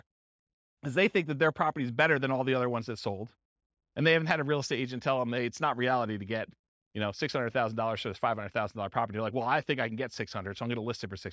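A speech recording with nothing technically wrong in it.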